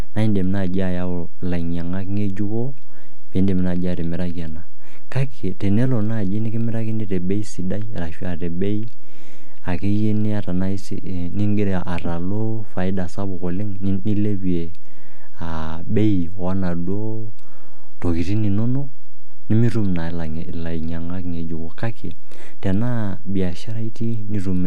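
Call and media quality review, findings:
DC offset, present throughout the speech. Not audible as a tone, but the whole waveform sits shifted off the zero line, by about -12 dBFS. Waveform view: trace rides visibly off centre for the full clip. Spectrogram: steady band pinned at 0 Hz. Probable component: capture front end or ADC path. Mechanism: constant bias added to every sample, eating headroom on one polarity.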